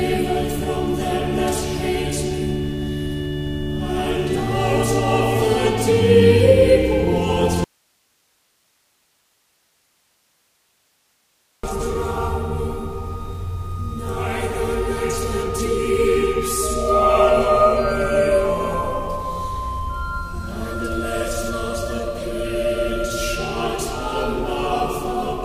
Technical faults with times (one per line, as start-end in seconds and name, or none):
7.64-11.63 audio dropout to a faint residue